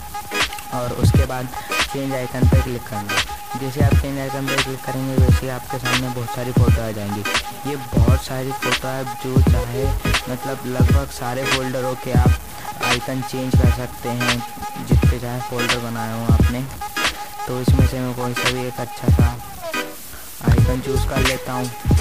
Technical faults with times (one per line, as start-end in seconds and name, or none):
0.00-22.01 stuck bit